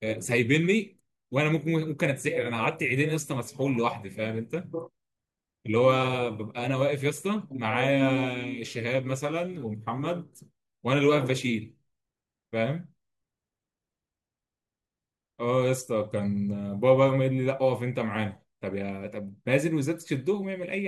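No technical faults are audible anywhere in the speech recording.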